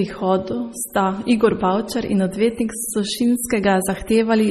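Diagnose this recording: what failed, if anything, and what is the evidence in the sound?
The codec stage is the likely culprit: heavy MP3 compression, with the encoder starved for bits across the whole recording, which fits a bitrate around 32 kbps. Nothing in the speech survives above 14.6 kHz, where the encoder has cut the treble. Below that, weak frequency lines drop in and out from frame to frame, leaving a watery, swirling texture, metallic chirps on s sounds, and smeared consonant attacks throughout.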